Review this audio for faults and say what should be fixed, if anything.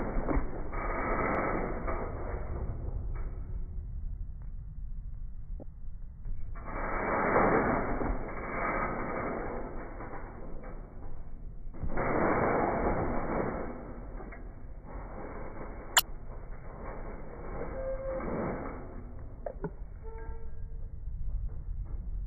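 There are two short glitches from damaged data in the compressed stream, at 5.59 to 5.63 s and 15.96 to 16.00 s, each about 35 ms long. In both spots a bit of the encoded data has been corrupted, so the decoder misreads those frames, loses its place and hunts for the next valid frame header. Each one comes out as a brief glitch in the sound. To prevent this, re-fetch or re-encode from an intact source and check file integrity with a checksum after transfer.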